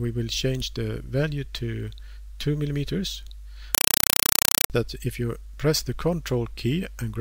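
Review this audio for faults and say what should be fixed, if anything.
From 3.75 to 4.70 s there's a compressed stream played as audio: loud, chattering static replaces the sound. That's a bitstream, which fits AC-3 (Dolby Digital), going over the digital link and being treated as plain PCM instead of decoded. You can hear each frame as a 4 ms burst of noise followed by silence, repeating 31.25 times a second, and that density points to something around 192 kbps. To prevent it, set the source to output PCM or make sure the receiving end actually decodes the stream before it's played.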